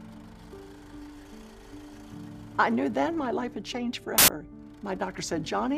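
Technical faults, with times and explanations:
4.18 to 4.28 s, samples built from the wrong bytes: for about a tenth of a second the sample bytes get stitched together wrongly, so the jittery low-order bits land in the high positions and you hear a sudden burst of loud, harsh broadband noise instead of the actual sound.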